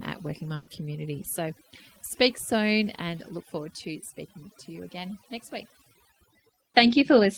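Right from the start you can hear overdone noise removal running across the whole clip. The denoiser was pushed too hard, so every frequency band that dips close to its noise estimate gets pulled way down or cut out entirely. The background collapses into twinkly, warbling specks, and the quieter parts of the speech get taken out along with the noise.

Then at about 0.55 s, running to 0.70 s, there's a burst of packet loss. Packets either went missing or arrived too late to play, so the receiver had to cover roughly 120 ms on its own. It did that by carrying the last bit of sound forward and fading it out, which comes across as a held buzz or a fading hiss, depending on what was playing just before. When the audio picks up again, about 120 ms of speech is simply gone.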